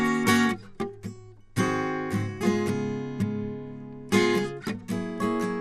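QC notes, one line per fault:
Throughout, MP2 compression: the music sounds dull, with nothing above about 14.4 kHz and a gurgling granular edge from starved sub-bands, likely low-rate MPEG Layer II around 80 kbps.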